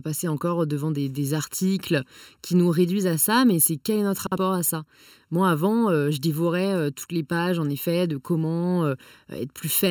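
Channel delay with comb filtering runs through the whole speech clip. One channel lags the other by well under a millisecond, roughly 0.7 ms. Summed to mono, shared content cancels at evenly spaced frequencies, the first notch near 700 Hz. The sound stays hollow and phasey.

From 4.26 to 4.37 s, frames arrive out of order. Two neighbouring blocks of about 52 ms each play swapped, which fits runs of two frames. The stretch becomes a brief garbled flutter. No time goes missing.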